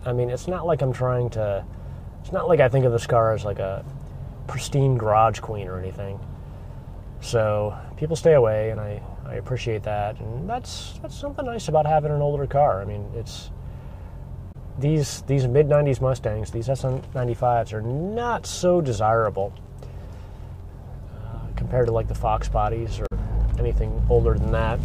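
At 14.49 to 14.56 s and again at 23.03 to 23.12 s, damaged data in the compressed stream makes the decoder misread frames and lose sync until it finds the next valid header. Each fault is a short chirp, squawk, click or hole, roughly 70 to 100 ms long, breaking into the sound.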